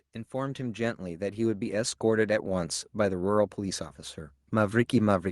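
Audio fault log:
0.31–2.78 s, automatic gain rising: the automatic gain control judged the input too quiet and ramped its gain up by about 9 dB over roughly two and a half seconds, so the speech and the background noise beneath it swell louder together.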